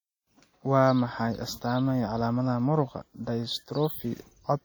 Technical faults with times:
0.00-4.64 WMA compression

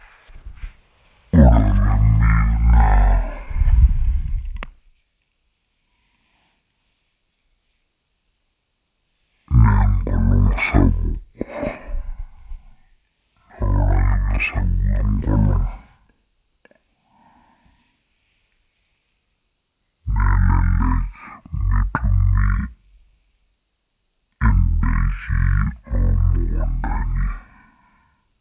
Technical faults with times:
0.00-28.41 wrong sample rate

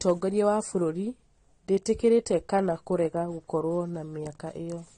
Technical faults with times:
0.00-4.98 transcoding between lossy codecs

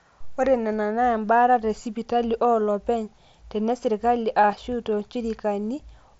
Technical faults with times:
4.52 concealed Bluetooth headset packet loss

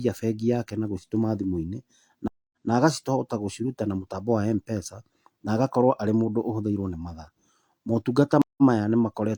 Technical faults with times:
2.28-2.70 stream reconnect
8.42-8.63 stream reconnect

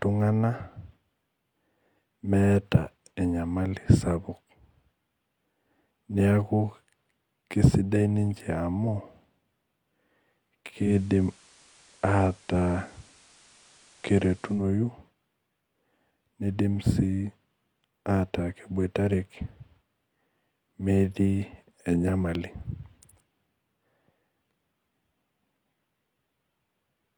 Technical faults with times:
10.79-14.66 digital radio blending to analogue

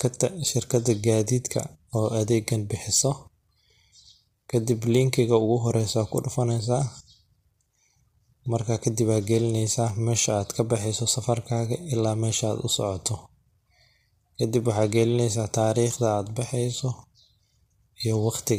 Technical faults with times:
0.00-18.58 low-delay AAC compression

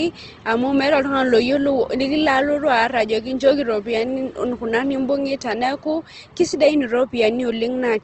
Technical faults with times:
0.00-8.04 Opus compression

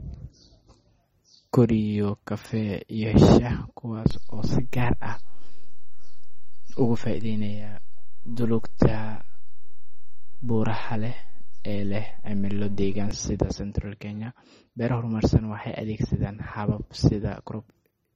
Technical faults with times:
0.00-18.16 MP3 compression
4.11-13.11 DC step

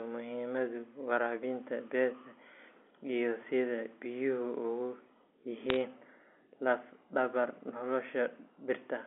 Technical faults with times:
5.69-5.76 bit errors on a digital phone line

